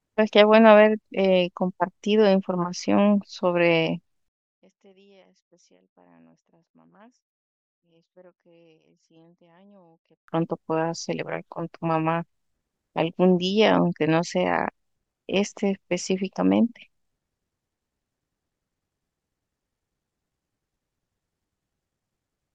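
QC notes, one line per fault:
4.28–10.28 s, one channel inverted: the centred speech drops about 33 dB in mono, leaving a faint residue rather than true silence, likely reversed polarity cancelling on summing.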